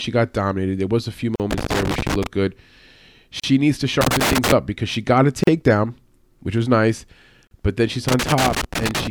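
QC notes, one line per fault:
1.36, 3.40, 5.44 and 7.47 s, gap at a join of encoded pieces: brief silences of 38 to 42 ms break the speech every 2 s, because each separately encoded piece keeps its padding at the join.
1.51 to 2.27 s, 4.01 to 4.52 s and 8.08 to 9.07 s, loose connector crackle: irregular scratchy bursts chop the speech as a worn contact rapidly makes and breaks.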